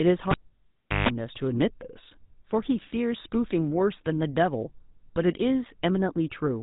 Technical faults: GSM full-rate codec; cable pulled and plugged in

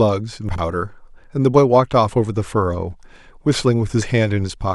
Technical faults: chunks out of order

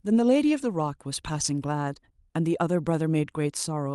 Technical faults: none

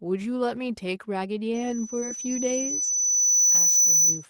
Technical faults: loudspeaker feedback squeal; short concealed packet loss

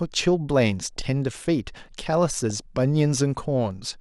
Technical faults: DAB burbling

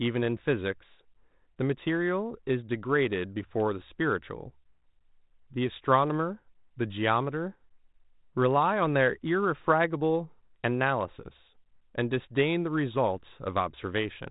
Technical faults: none

